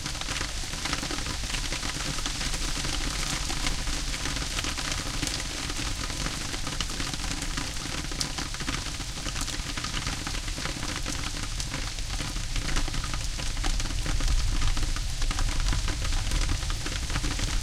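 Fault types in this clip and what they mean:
No faults detected.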